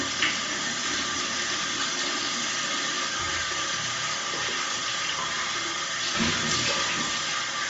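From start to end, the sound carries a grainy, breathy coarseness with nothing above about 7.7 kHz. This is likely Bluetooth LC3 compression at a low bitrate.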